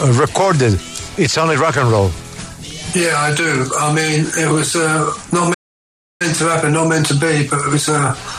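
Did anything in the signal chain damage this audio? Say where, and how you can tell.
Yes. A playback stall at the output stage: the sound stops mid-flow at 5.54 s and stays silent until 6.22 s, a gap of about 0.66 s, then resumes. The likely cause is the player's buffer running dry or its output thread being blocked, so nothing reached the output until it recovered.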